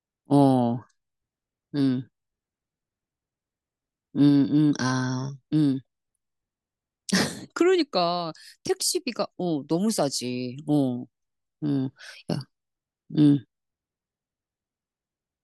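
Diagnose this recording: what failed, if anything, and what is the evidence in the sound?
Nothing failed; no stage shows any fault in this recording.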